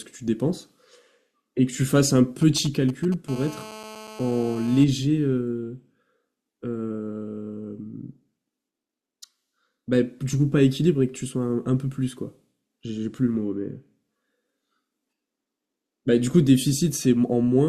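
GSM signalling bursts run from 2.42 to 3.14 s in this speech recording: a galloping dit-dit-dit of brief buzzes at about 217 Hz, sitting roughly 20 dB under the speech. A 2G handset close to the recording chain is sending short clusters of radio bursts while it signals the network, and some circuit in the audio path is rectifying those pulses into audible clicks at the handset's burst rate. GSM phone buzz follows from 3.28 to 4.84 s, a hard, raspy, harmonic-rich drone at about 217 Hz, around 18 dB below the speech and unrelated to it. Here the phone is in a call, so its bursts arrive steadily 217 times a second, and the same rectification turns that pulse train into an unbroken buzz rather than a broken pattern.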